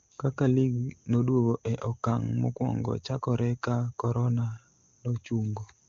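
A speech recording with no technical faults to report. It has the character of the AMR wideband (HD Voice) codec, with content reaching to about 7 kHz and at most faint coding traces, which fits the codec's top rate of 23.85 kbit/s.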